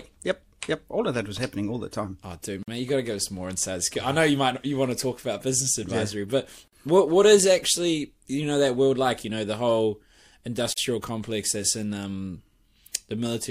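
Gaps at joins of encoded pieces occur at 2.63, 6.68 and 10.73 s, recurring every 4 s, each a 49 ms silence where separately encoded chunks were butted together without trimming encoder delay and padding. The speech stops abruptly after "the time oh dude" and "business advisory yeah but", and before "complex that's in um", then resumes where it left off.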